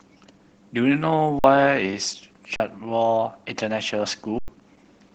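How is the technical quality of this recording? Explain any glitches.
The technical quality is poor. The speech is compressed throughout and broken by three short dropouts.

Throughout, the speech sounds muffled, hoarse and faintly robotic, the mark of Opus voice compression at 12 kbps, using SILK with the band limited to 8 kHz.

At 1.39 to 1.44 s, 2.56 to 2.60 s and 4.39 to 4.48 s, the sound freezes flat and then resumes. This is an underrun with held sample: the output buffer emptied, the converter held its last value, and the audio that arrived in the meantime was lost.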